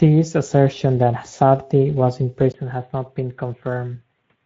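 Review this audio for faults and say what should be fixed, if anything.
Speex codec damage runs through the whole clip. The speech sounds hoarse and grainy, which is plainly audible. That fits a wideband setting near 16.8 kbps. Nothing is present above 7.7 kHz. Too few bits reach the excitation, so detail turns to noise. Raise the Speex quality setting or use a stronger codec.

Input switched to a poorer device at 2.52 s, right after "was in". A brief gap of about 20 ms marks the change. From there to the end, the sound turns dull and boxy. Nothing remains above 3.8 kHz. The level drops a few decibels, and a faint new noise floor appears. The cause is likely a switch to a narrower microphone or a headset call profile. Lock the input device for the whole recording and disable automatic switching.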